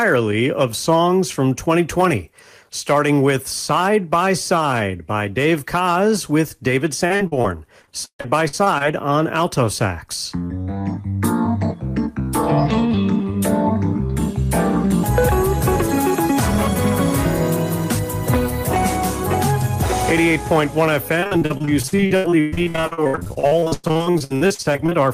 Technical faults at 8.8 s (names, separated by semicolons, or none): repeated packet loss (robotic sound)